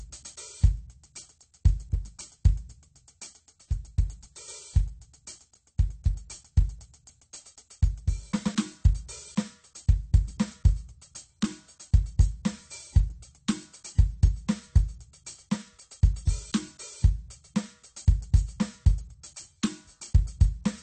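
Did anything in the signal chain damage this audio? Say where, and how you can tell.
Yes, at the codec stage: the music is dull and fizzy throughout, with nothing above 8.6 kHz, likely AAC compression at a low bitrate, perhaps around 32 kbps. A spectrogram would show a hard ceiling.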